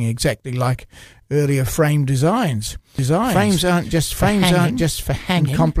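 From 2.99 s, right after "like earlier frame designs", a doubled audio track appears: a full-level copy trails about a second behind, likely from an out-of-step edit, running to the end.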